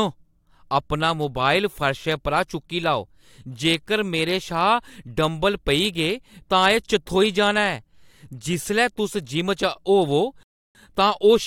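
The player's buffer ran dry near the end of this speech recording, causing a rebuffering stall from 10.43 to 10.75 s. Playback halts into silence for about 320 ms, then picks up exactly where it stopped, so nothing is skipped but the pause stretches the timing.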